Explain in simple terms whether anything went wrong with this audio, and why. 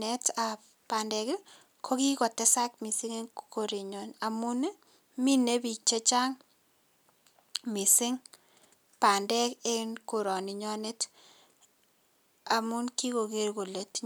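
Nothing went wrong with this recording of speech. No faults can be heard anywhere in it.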